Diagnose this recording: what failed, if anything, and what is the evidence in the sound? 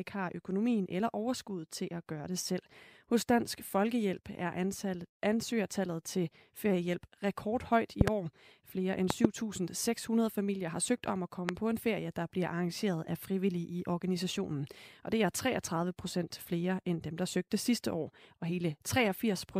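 Loud pops, likely from an electrical transient in the analogue wiring, hit at 8.01–8.10 s and 9.10–9.27 s (double pops) and 11.49–11.51 s (single), peaking about 20–25 dB over the speech. The speech continues unbroken underneath, which rules out dropouts.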